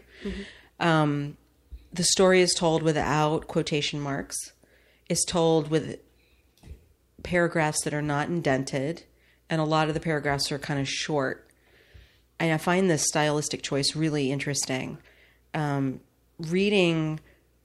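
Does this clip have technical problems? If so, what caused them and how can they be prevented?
No, nothing in this speech recording stood out as a technical problem on listening, so there is nothing here that needs a cause or a preventive step.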